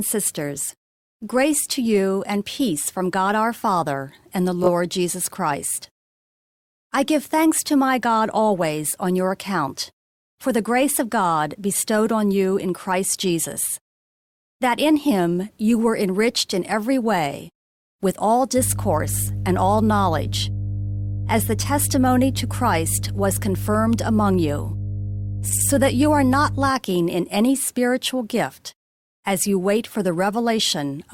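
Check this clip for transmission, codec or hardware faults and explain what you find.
Two faults are present: repeated frames, twice, and mains hum.

Repeated frames at 4.63 s and 25.49 s: the codec stream delivered the same frames again, so the decoder replays them. At 4.63 s a 20 ms frame plays twice more, adding 40 ms; at 25.49 s an 80 ms block repeats twice, adding 160 ms, producing an audible stutter.

Mains hum from 18.56 to 26.72 s: a ground loop or nearby transformer couples the 50 Hz power line into the signal, laying a steady low tone under the speech. It is strong, sitting only a little below the speech level.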